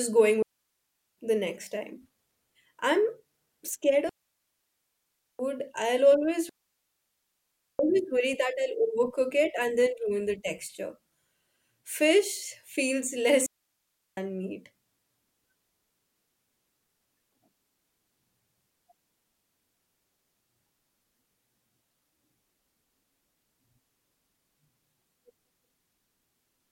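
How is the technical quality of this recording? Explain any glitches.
The speech is interrupted four times by digital wireless dropouts. They run from 0.42 to 1.18 s just before "the next time", from 4.09 to 5.39 s just before "I'll always", from 6.49 to 7.79 s between "I'll always" and "always worry", and from 13.46 to 14.17 s. These gaps last between 0.71 and 1.3 s. Each time, the receiver has lost too much data from the digital link and mutes with a very short fade, leaving a clean hole of near silence. No hiss or noise burst comes before or after, unlike an analog wireless dropout.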